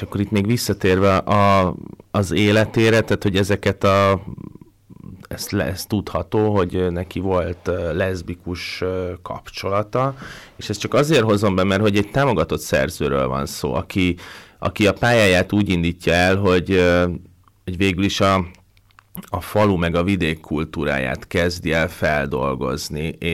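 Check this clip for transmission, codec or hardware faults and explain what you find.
Hard clipping runs through the whole clip. The speech reaches about 13 dB more level than some stage in the chain can pass, so every loud peak is sheared flat. A few percent of samples were pushed past that stage's limit, enough to give the louder syllables a harsh, fuzzy edge rather than occasional crackle. On the waveform the peaks show as flat-topped plateaus; on a spectrogram, smeared harmonic energy extends high up the spectrum on each loud stretch.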